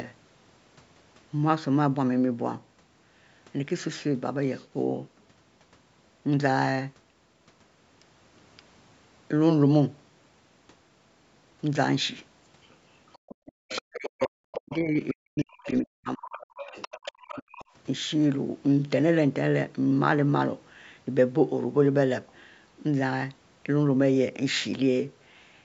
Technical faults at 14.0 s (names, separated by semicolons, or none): other side's voice leaking through; speech suppressed in double talk